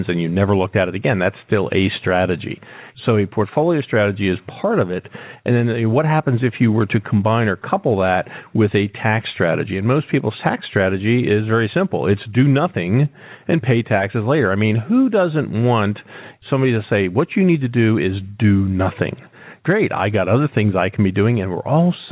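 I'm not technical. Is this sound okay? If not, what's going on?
Yes, it sounds fine.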